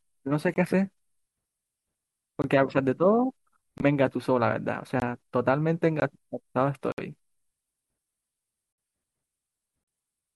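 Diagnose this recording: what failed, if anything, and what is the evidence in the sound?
The speech keeps dropping to blocks of digital silence at 0.54, 2.42, 3.78, 5.0, 6.0, 6.92, 8.73 and 9.84 s. Most holes last 20 ms, and the last three run 60, 55 and 40 ms. It looks like a driver or buffer underrun: the output wasn't filled in time, so zeros went out.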